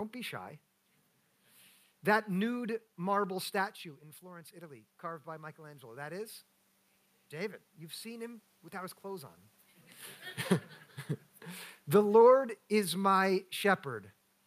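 From 4.2 s, just after "nude marble statue in", the speech and the room noise behind it swell together until about 6.42 s, climbing by about 5 dB. This is automatic gain rising. The level reaching the microphone had fallen by about 12 dB after the talker moved away around 3.5 s, and the gain control responded by turning itself up over a couple of seconds. Because it raises everything it receives, the background noise rises along with the voice.

From 11.85 s to 13.88 s, the speech and background sink together by about 3 dB. This is automatic gain falling. The gain control judged the input too loud, or its background noise too strong, possibly after the talker moved around 9.5 s, and eased its gain down over roughly two seconds. The fade is slow, and the room noise drops in step with the voice, so it reads as the system's level adjustment rather than the talker changing distance.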